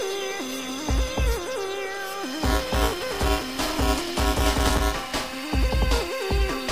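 From 2.44 to 5.39 s, buffer tearing splices a slightly stale slice into every period. The result is a steady 345 Hz rattle, fitting a 128-sample buffer, heard only with signal, unlike random dropouts.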